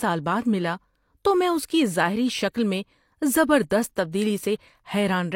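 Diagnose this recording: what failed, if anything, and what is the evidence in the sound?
The codec stage failed, producing pre-echo at 4.11 s, just after "ظاہری شکل میں زبردست". A brief hiss, about 18 ms long, precedes a sharp attack. Quantisation noise sized for the loud onset spread back across its transform block into the quieter moment before it, smearing the attack.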